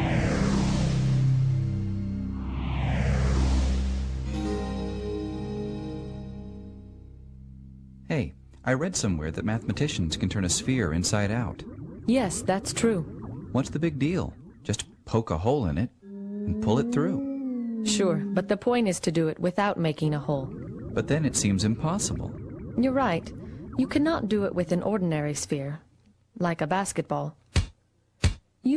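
No technical faults can be heard anywhere in this recording.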